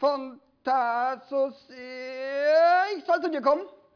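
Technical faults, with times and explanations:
No technical faults, with times and explanations, to report.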